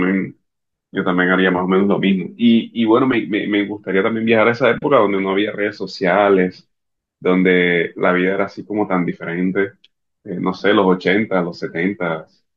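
Nothing in this speech recording stands out as a technical fault at any point, so there's nothing to flag here.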